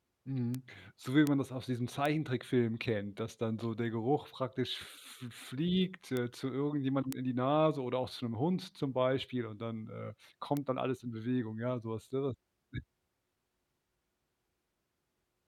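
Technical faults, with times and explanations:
0.55, 1.27 (after "so wie"), 2.06, 6.17, 7.13 and 10.57 s: bit error spike. Each is one sharp broadband tick of about −16 dBFS, louder at about −10 dBFS at 7.13 s. A flipped bit made one sample (two at 1.27 s) jump by a power of two and snap back.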